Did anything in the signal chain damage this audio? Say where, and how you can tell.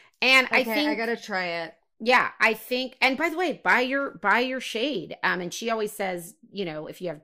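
Yes, at the codec decode stage. At 5.52 s, between "your shade um and" and "she always", the speech jumps forward by roughly 10 ms. That points to compressed frames skipped: a few whole frames were missing from the file or rejected as damaged by the decoder. The skip fits a small multiple of the frame length.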